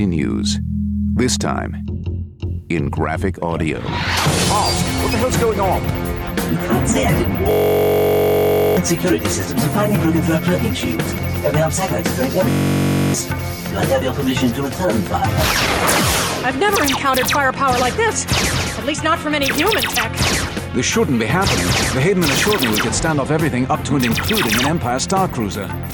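Across the whole clip the level breathes, with a gain swing of about 5 dB. Loud and quiet passages sit unnaturally close together, so the sound feels squashed. This is gain pumping. The likely cause is input gain set far too high, with a fast limiter or compressor clamping down on each peak and releasing again in the pauses.

From 7.51 to 8.77 s the audio collapses into a steady buzz pitched around 46.9 Hz, and the same thing happens again from 12.50 to 13.14 s. Each buzz is one 21.33 ms fragment of audio repeated exactly, dozens of times over, which fits a 1024-sample buffer. This is a system hang loop. The computer or driver stalled while the sound hardware kept replaying the same ring buffer. Roughly one and a half seconds of real audio is missing at the first event and well over half a second at the second.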